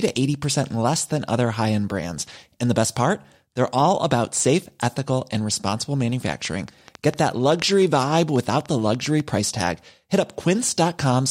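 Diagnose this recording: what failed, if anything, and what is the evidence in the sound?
A train of clicks runs from 6.27 to 9.21 s. There are roughly twenty similar pops, about 6.5 per second, at uneven spacing, standing around 5 dB above the speech. They tick through the pauses too. Likely cause: interference or a faulty connection or power supply in the analogue stage.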